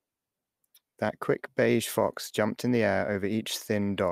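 Nothing stood out as a technical problem on listening to the recording.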